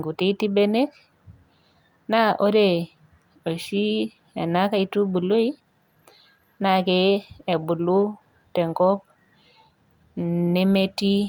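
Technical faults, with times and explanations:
No technical faults can be heard in this speech.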